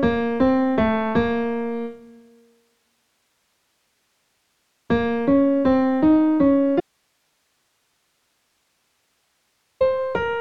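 At 6.80 s the sound drops out abruptly and stays gone until 9.81 s, about 3.0 s. This audio dropout to a faint residue leaves only hiss, roughly 50 dB below the signal, likely a loss of input while the downstream path remained live.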